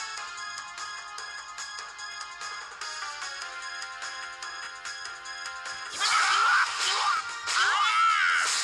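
Overlapping chunks at 2.13–2.15, 4.65–4.67 and 7.17–7.20 s: each 2.5 s chunk starts 23 ms early, so that slice plays twice, heard as a click or stutter.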